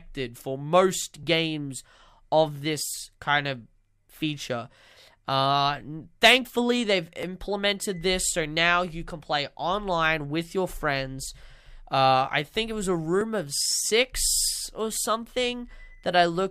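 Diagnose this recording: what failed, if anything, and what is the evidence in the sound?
An overlap between stream segments, a playback-stage fault, produces a tiny skip at 7.23 s, just after "thankfully they've". Two segments' time stamps overlapped, so the player trimmed about 16 ms of real audio and the waveform jumps. Unlike a buffer dropout, nothing goes silent; sound simply goes missing.

GSM signalling bursts enter through the analogue wiring from 13.38 to 14.81 s as a galloping dit-dit-dit of short 217 Hz buzzes, about 30 dB below the signal. A nearby 2G phone was signalling, and the circuit rectified its radio bursts. The gated, rhythmic pattern distinguishes it from steady mains hum.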